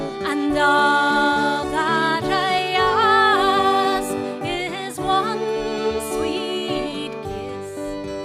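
At 2.59 s there is a block of digital silence: a run of samples about 0.67 ms long drops out and then resumes, which fits a 32-sample buffer that was not filled in time. The signal drops to silence and back with no fade, so both edges fall within the same instant. Because the gap is so short, it is heard as a tick or dip rather than a hole in the sound.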